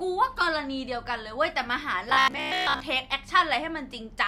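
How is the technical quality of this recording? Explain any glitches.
One glitch: robotic sound from repeated short buffers, 2.10 to 2.80 s. Repeating a 15 ms fragment, likely from late-arriving audio, imposes a fixed 66.7 Hz metallic buzz over most of the span.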